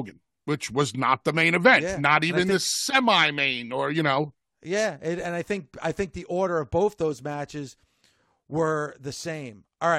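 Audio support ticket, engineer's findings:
Listened to the full speech recording; nothing stood out, no action needed.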